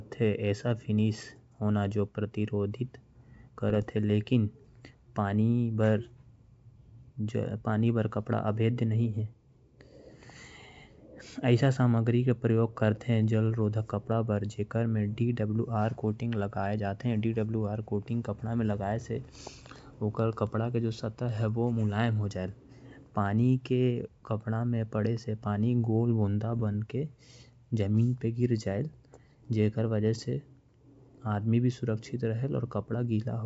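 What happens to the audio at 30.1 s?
At 30.1 s the speech carries straight through without any dropout, click or distortion, and the G.722 wideband coding shows no audible damage there.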